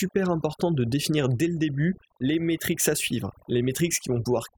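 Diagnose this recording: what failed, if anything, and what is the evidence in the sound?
The failure is overdone noise removal in the call-processing stage, present across the whole speech clip. The background collapses to near silence studded with twinkling specks. The suppressor is pulling individual frequency bands far down or fully off wherever they sit near its noise estimate, taking quieter voice components with them. On a spectrogram this shows as scattered isolated blobs between speech, and ragged, hollowed-out harmonics within it.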